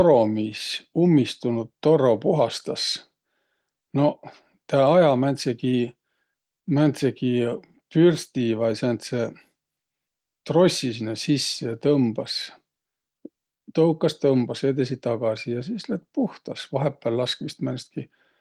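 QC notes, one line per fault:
No faults were found in this speech clip. There is nothing here to log.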